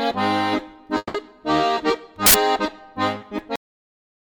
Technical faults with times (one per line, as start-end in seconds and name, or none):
0.97-1.24 call audio freeze
2.26-2.34 uninitialised buffer
3.56-4.39 cut-off end